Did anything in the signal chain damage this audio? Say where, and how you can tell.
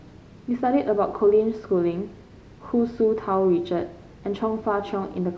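No, nothing audible in this speech points to damage at any stage of the chain.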